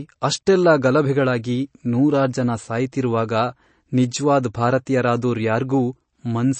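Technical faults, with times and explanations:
Throughout, MP3 compression. The speech has nothing above 8.3 kHz, so the top of the sound is simply missing and sibilants lose their edge. The codec damage is plainly audible as a watery, swirling texture. Quiet frequency components appear and vanish from one frame to the next because the encoder runs short of bits and drops them. The sound fits a low bitrate of about 32 kbps, and the likely cause is heavy MP3 encoding.
At 0.46 s, pre-echo. A short burst of hiss arrives just ahead of a sharp attack and spreads about 10 ms before it. The codec spreads its quantisation noise across a whole block. The noise is sized for the loud attack, so it also fills the quiet moment just before the attack begins. That makes the attack sound smeared and soft instead of crisp.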